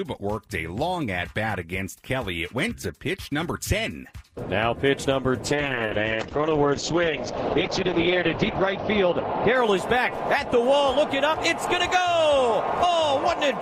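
From 5.46 s to 10.37 s the sound turns rough and watery, and its top end is cut away from a full 20 kHz down to 6 kHz, leaving it muffled for a worst stretch of about 3.1 s before clarity returns. This is a call bitrate drop: the bandwidth estimate fell, so the encoder had far fewer bits, coded more coarsely and discarded high frequencies. The degradation fits a fall from about 48 kbps to 8 kbps.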